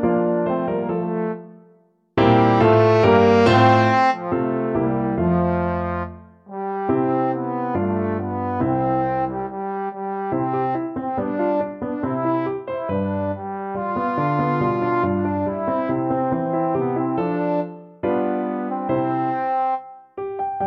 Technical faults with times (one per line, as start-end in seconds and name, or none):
none